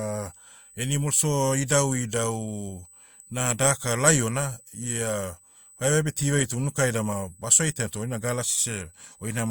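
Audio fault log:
throughout, USB whine: a fixed 8 kHz tone, around 30 dB below the speech, from the bus's 125-microsecond microframes leaking into the power or ground; a steady horizontal spectrogram line.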